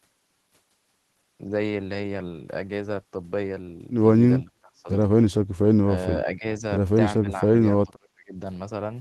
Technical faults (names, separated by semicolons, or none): speech suppressed in double talk